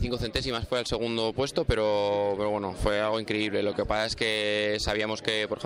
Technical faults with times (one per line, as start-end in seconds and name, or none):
none